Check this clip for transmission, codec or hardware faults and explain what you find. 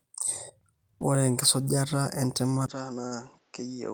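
Two faults are audible, both near the end of the speech.

From 2.66 s to the end, the input likely switched to a poorer device. A 20 ms gap marks the change. Then the band stops at 7.6 kHz, the level falls by about 10 dB, and a new noise floor appears around 35 dB down. The speech turns duller and quieter.

From 3.07 to 3.14 s comes a short stall from a late packet. The jitter buffer ran dry, so the receiver held the last sound for 40 ms until the packet arrived. Nothing is lost, but timing slips 40 ms later. A sound drags briefly.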